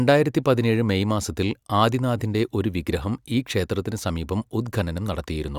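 No technical faults can be heard anywhere in this recording.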